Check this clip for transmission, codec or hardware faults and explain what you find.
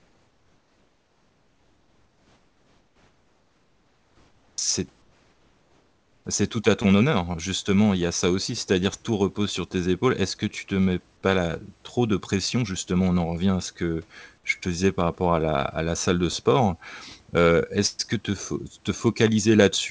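Two transmission faults show up, both around the pauses, heard through a call path that has nothing above 8 kHz.

Comfort noise in place of the background runs from 0.00 to 4.58 s and again from 5.02 to 6.25 s. The real room tone turns into a flat, featureless hiss, about 5 dB and then about 4 dB quieter. It's likely discontinuous transmission, with the receiver filling the silence with synthetic noise.

The onset is clipped by the voice detector at 4.55 to 4.58 s. About 30 ms of the sound's start goes missing, so it pops in abruptly with no soft lead-in. The likely cause is a detector that was slow to wake, leaving comfort noise in that gap.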